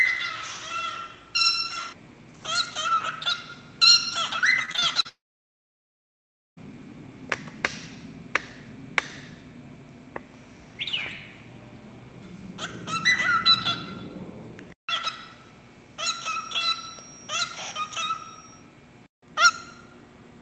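Between 4.65 and 5.07 s the audio turns choppy with pieces missing: this is repeated packet loss, five short gaps (the longest 34 ms) patched by stretching the preceding sound, covering about 28% of that span. Unlike a dropout, real audio keeps returning between the holes. Straight after, from 5.09 to 6.59 s, the sound smears into a brief fading buzz and then about 1.4 s of near silence before resuming further on with that stretch gone. One unbroken gap rather than rapid chopping marks this as a long network dropout, likely a stall in arriving packets. From 16.02 to 18.69 s a thin, steady whistle at 5.6 kHz sits about 20 dB under the main sound, swelling and fading slowly in level without building up. That unsteady, self-sustaining single tone, rather than a fixed hum, points to a feedback whistle, likely a loudspeaker-to-microphone loop held just short of howling. All of this comes through a call codec path whose top end stops around 8 kHz, which fits Opus at a modest bitrate.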